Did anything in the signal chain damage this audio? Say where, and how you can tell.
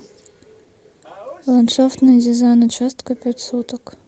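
No, nothing in the chain damaged this speech; the audible band stops around 8 kHz, which fits the Opus call path it came through working as designed.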